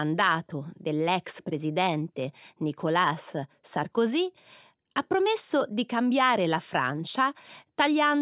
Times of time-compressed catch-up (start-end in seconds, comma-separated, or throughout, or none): none